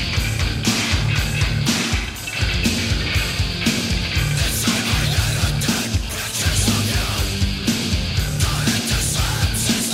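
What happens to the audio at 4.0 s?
Nothing goes wrong at 4.0 s; the audio plays through that moment intact, with no dropout, click or distortion.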